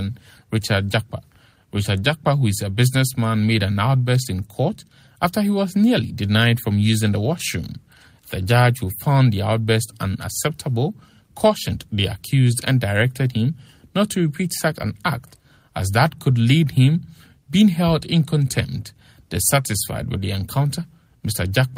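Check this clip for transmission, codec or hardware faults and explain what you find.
Nothing stood out on listening to this clip.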